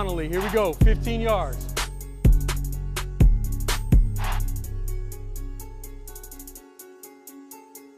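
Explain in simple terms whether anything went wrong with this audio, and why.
Nothing went wrong with this recording's signal: there are no dropouts, glitches or other technical faults anywhere in it.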